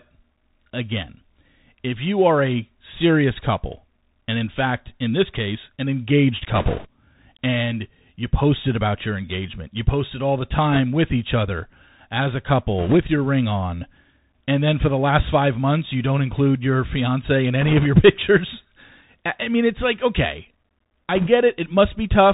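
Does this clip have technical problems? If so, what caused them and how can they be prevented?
Yes. The whole recording went through a Bluetooth CVSD headset codec, the narrowband link that codes each sample as a single up-or-down bit at a rate consistent with 64 kbit/s and adapts its step size. Nothing above 4 kHz survives, so the speech is muffled and boxy. Loud, bright sounds outpace the step size and distort, s sounds come out scratchy, and a granular hiss sits beneath everything. Using a wideband headset profile, or a wired or USB microphone, prevents this.

There are also bit errors on a Bluetooth voice link in five short bursts: 6.55 to 6.87 s, 10.72 to 10.80 s, 12.79 to 12.97 s, 17.61 to 17.86 s, and 21.15 to 21.28 s. A few percent of the bits were flipped in each burst, most heavily in the first one. Because every CVSD bit carries the same small weight and its errors fade quickly, the result is a rushing, crackly noise over the speech rather than sharp clicks. 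Keeping the headset close to the receiver and away from 2.4 GHz congestion prevents these.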